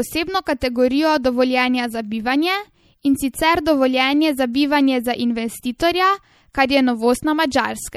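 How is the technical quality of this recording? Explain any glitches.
Technical quality is poor. Throughout, the speech sounds watery and swirly, with chirpy, metallic sibilants. This is likely MP3 compression at a low rate, around 64 kbps: short of bits, the encoder lets weak frequency lines flicker on and off between frames.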